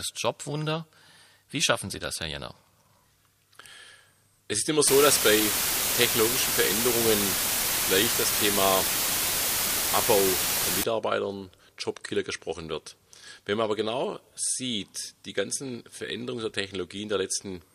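From 4.87 s to 10.84 s the audio drops to low bit depth with dither: samples are rounded to just 4 bits after dither is added, so the rounding error becomes a steady, even white hiss, roughly as loud as the sound itself, with no audible distortion.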